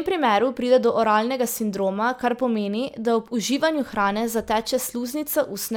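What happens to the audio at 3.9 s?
Nothing goes wrong at 3.9 s: the speech carries on intact through that moment, with no dropout, click, distortion or other fault to be heard.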